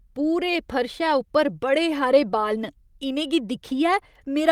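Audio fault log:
No faults heard anywhere in this speech clip.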